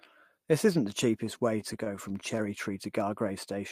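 From 1.26 to 2.23 s the speech shows repeated stalls (stutter). Audio was arriving late or slower than it was being played out, so the jitter buffer emptied eight times in under a second. Each time, the receiver extended the last sound to fill the wait, about 91 ms in total, with the longest hold around 18 ms. Nothing is lost, but roughly a tenth of that stretch is filler, so the speech drags and catches.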